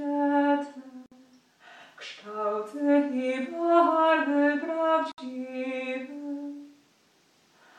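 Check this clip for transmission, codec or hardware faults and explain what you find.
There are two gaps at a join of encoded pieces. The first runs from 1.06 to 1.12 s and lasts 56 ms. The second runs from 5.12 to 5.18 s and lasts 63.5 ms. They fall 4 s apart, which points to the audio being encoded in separate pieces and butted together untrimmed. Each piece keeps its encoder's start-up delay and its padded final frame, so silence opens mid-sound. The codec smears the edges, so the silent part is shorter than the gap. The sound then resumes where it stopped.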